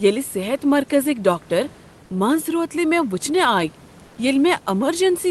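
Speech recorded over a call. From 4.07 to 4.17 s, the room background gives way to comfort noise in place of the background. A flat, featureless hiss about 2 dB quieter fills those 100 ms, likely from discontinuous transmission in the sender.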